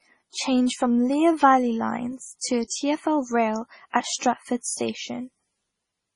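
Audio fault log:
throughout transcoding between lossy codecs: two layers of smeary, swirling artefacts overlap, with nothing above 10.6 kHz; likely a low-rate MP3 later re-encoded with Opus.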